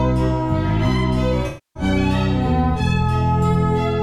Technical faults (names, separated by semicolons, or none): AAC frame loss with concealment